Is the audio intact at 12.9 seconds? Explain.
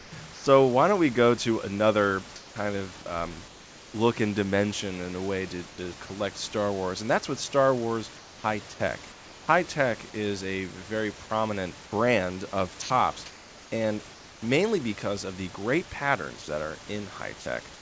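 No. From 12.82 to 13.72 s, comfort noise replaces the background: the room's textured noise gives way to a steady, featureless hiss, likely because the sender stopped transmitting during the pause and the receiver synthesised fill. On a spectrogram, the grainy floor turns smooth and uniform.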